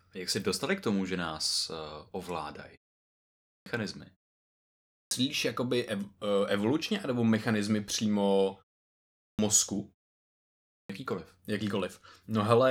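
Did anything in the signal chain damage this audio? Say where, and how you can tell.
Yes, at playback: speech bursts in abruptly at 3.12 s (after "že nás uh ovládají"), 4.61 s, 8.86 s (after "evolučně nebo mechanizmy přímo") and 10.38 s, each missing its first half-second. This is a clipped start after a pause: the output device sleeps through the short gaps and swallows sound while it wakes.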